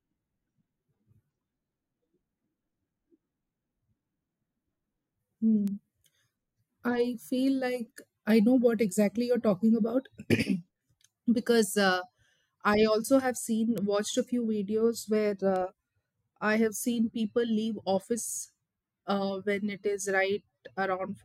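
Three sharp, isolated ticks cut through this speech at 5.68 s, 13.78 s between "I also have" and "watched a few", and 15.56 s, peaking at about -20, -14 and -26 dBFS. These are bit error spikes: a flipped bit that throws one to three samples far off, then snaps back.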